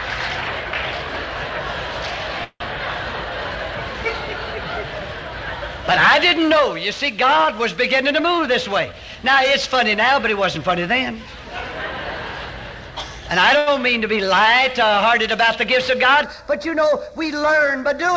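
At 2.44 s the sound is held as a fading buzz, then about 60 ms of silence, for 0.18 s. This is likely a call audio freeze: delayed packets emptied the buffer. Playback resumes with nothing lost.

From 8.09 to 10.41 s a jitter buffer speed-up runs the audio at 107% without a pitch change. Tiny pitch-period slices, around 150 ms in total, are cut. It sounds hurried.

At 13.58 s a short stall from a late packet stretches the last sound for 85 ms. It is held too long, with a slight buzz or dip, then continues intact.

From 16.24 s to the end, a channel delay of a fraction of a millisecond causes comb filtering when the channels are summed. Notches starting near 3 kHz make the sound hollow and phasey.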